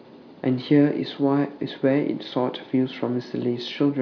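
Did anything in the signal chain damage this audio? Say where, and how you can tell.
No, nothing in this speech recording stood out as damaged on listening.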